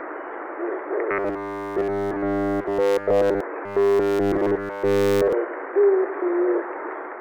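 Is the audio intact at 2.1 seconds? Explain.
No. From 1.11 to 3.40 s the audio has robotic sound from repeated short buffers: essentially every segment is a looped copy of roughly 10 ms of audio, likely because new data arrived too slowly, imposing a rigid 100 Hz metallic buzz.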